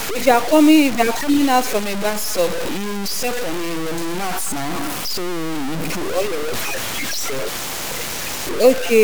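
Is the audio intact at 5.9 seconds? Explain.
No. The speech appears to have been truncated to roughly 4 bits without dither, likely a low bit depth without dither fault running through the whole clip. The rounding error tracks the signal, sitting only about 10 dB below it, so at 5.9 s the speech sounds grainy and gritty, and the quietest stretches sputter or drop out.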